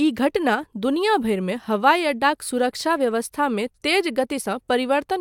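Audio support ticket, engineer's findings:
No faults found on review of the speech recording. Nothing audible points to a capture, processing or transport component.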